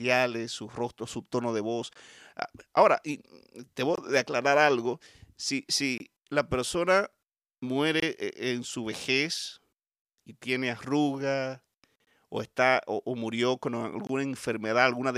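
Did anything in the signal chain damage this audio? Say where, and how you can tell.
Yes, a gap between chunks, from chunked storage or playback. There are hard-edged 23 ms holes at 1.93, 3.96 (after "ahora y te"), 5.98, 8.00, 12.05 and 14.07 s, about every 2 s. Silence is left at each join.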